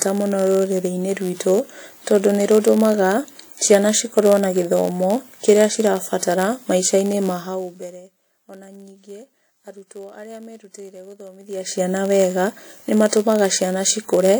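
WMA compression, throughout the clip, is the likely cause of the ringing, washy quality on the speech and the hiss that swells and fades with it. A transform codec like this quantises the signal in long blocks, so the quantisation noise smears over tens of milliseconds and faint spectral detail is zeroed out. The damage is plainly audible, which fits a low bitrate of around 48 kbps.

Block size mismatch (padded) also runs through the whole clip. One stage delivers shorter blocks than the next stage expects, and the shortfall in each block is filled with silence. The result is a steady buzz at 91.5 Hz, the rate at which those tiny gaps repeat. The inserted zeros also stretch the timeline, so the speech plays at 0.996 times normal speed, about 0.4% slow, with its timbre unchanged.

Zipper noise appears from 7.35 to 8.03 s, while the level is pulled down by about 20 dB. The gain moves in 1 dB jumps, roughly fifty per second, with no smoothing between them. 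Each jump puts a small discontinuity in the waveform, and together they make an audible ticking, zipping texture over the fade. The same fault returns from 11.37 to 11.83 s, just after "arutwo arĩa merutĩire", this time as the level climbs back up by about 20 dB in the same coarse 1 dB steps.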